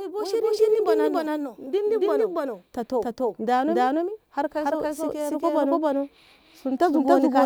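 A doubled audio track runs throughout the speech: a second, full-band copy trails the original by roughly a third of a second at about the same loudness, with no decay or room colour. The likely cause is a slower second capture path mixing in alongside the first.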